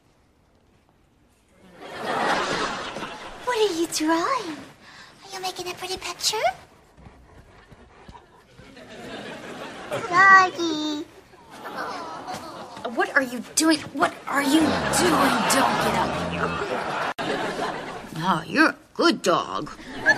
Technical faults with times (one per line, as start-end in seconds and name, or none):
none